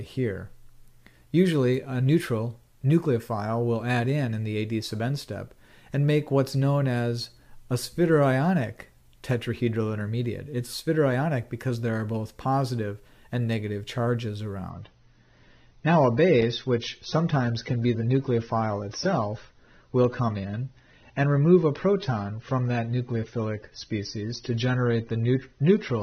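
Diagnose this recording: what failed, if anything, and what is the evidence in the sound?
The failure is at the network stage, where an adaptive stream dropped to a lower bitrate. From 14.70 s to the end, the sound loses everything above 6.3 kHz and picks up the smeared texture of a starved codec. The switch is abrupt, with no gap or glitch. That points to the player swapping to a much leaner AAC encode, perhaps around a quarter of the earlier rate, rather than to a fixed filter or a packet dropout.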